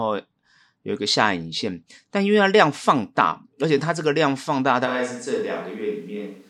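At 4.88 s the speech abruptly turns roomy and hollow, with thinner low end, and stays that way to the end of the clip. This points to a switch to a distant microphone, likely because the close microphone's feed dropped out and a pickup further from the talker took over. Overall level barely moves, but room noise becomes audible at roughly 35 dB below the speech.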